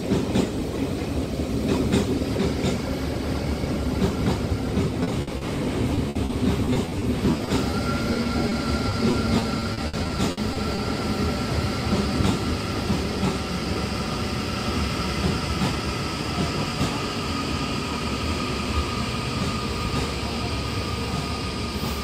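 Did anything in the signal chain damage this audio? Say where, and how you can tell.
Yes, the network path damaged it. Short concealed packet loss appears at 5.03–5.09, 5.37–5.43, 8.13–8.17, 8.23–8.27 and 8.49–8.53 s: isolated 20 to 40 ms holes patched by extending the preceding sound, heard as brief smears or wobbles. Unlike the repeated loss, each one stands alone.

A burst of packet loss at 5.21–5.29 s removes 60 ms in a row. Concealment holds the last sound and fades it, giving a held buzz or dying hiss before the audio resumes further on. It is longer and more clearly a gap than the single-hole smears nearby.

Repeated packet loss (robotic sound) covers 5.95–7.75 s with 12 gaps (300 ms filled) and 8.89–10.79 s with 11 gaps (320 ms filled). Each gap is at most 60 ms, and about 17% of each span is synthesized. Back-to-back patching makes the sound choppy with pieces missing, where isolated losses only blur it briefly.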